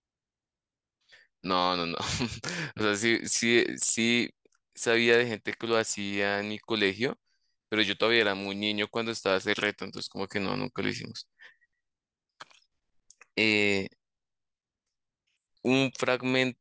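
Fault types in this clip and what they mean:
Resampler restarted on every block: The sample-rate converter starts fresh on each short block instead of running continuously. Each block edge lacks its true neighbouring samples, so a small error appears there. The blocks are 10 ms long, so the errors repeat at 100 Hz. They merge into a steady low buzz under the speech from 3.0 s to the end. The conversion appears to be from 24 kHz down to 16 kHz.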